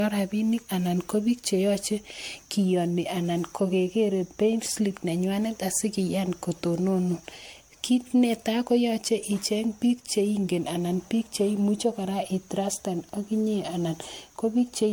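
Right from the start and all the way through, the speech has that swirly, hollow, smeared quality of generation loss, likely from being run through MP3 around ten times at something like 96 kbit/s, each pass stacking new noise and holes. Consonant attacks blur, with nothing above 19.9 kHz.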